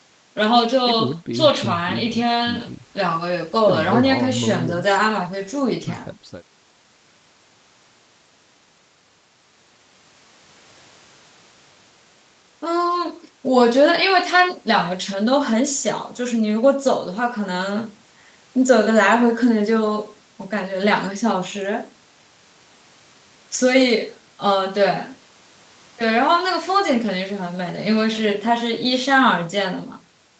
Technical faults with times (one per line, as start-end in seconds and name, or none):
none